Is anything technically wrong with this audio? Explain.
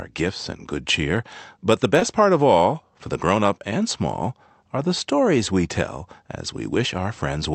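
Yes. At 1.99 to 2.03 s there is a short concealed packet loss. About 20 ms of the speech arrived too late for the decoder, so the receiver bridged the gap by extending the sound just before it and then blended back into the real audio. It comes across as a brief smear or wobble, not silence or a sharp click, and that is what separates it from an uncovered dropout. Throughout, the call path's audio band stops at about 8 kHz.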